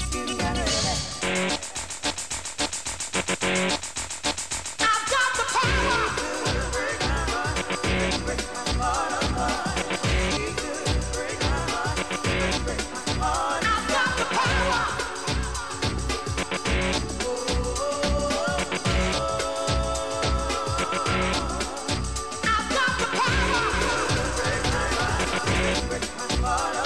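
A doubled audio track appears from 23.73 s to 25.75 s: a second full-band copy of the sound trails roughly 400 ms behind, around 5 dB quieter, with no decay or room colour, and cuts in and out abruptly. Likely cause is a slower second capture path or misaligned edit.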